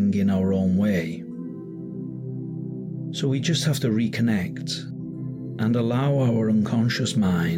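No technical faults can be heard anywhere in the clip, so there are none to describe.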